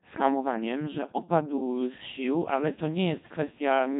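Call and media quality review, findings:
Codec 2 vocoder, whole clip: robotic, buzzy speech with heavy damage. Consistent with a 2.4 kbit/s Codec 2 link that carries only pitch, voicing, energy and spectral envelope; the decoder rebuilds the voice from sine waves, so the original waveform is lost.

Mains buzz, 2.21 s to end, starting after "hamowaniem że opadł z": steady raspy buzz, faint and well below the speech. 50 Hz harmonic series. Probable component is a dimmer, rectifier or unshielded run injecting switching spikes twice per mains cycle, with harmonics up into the kHz range.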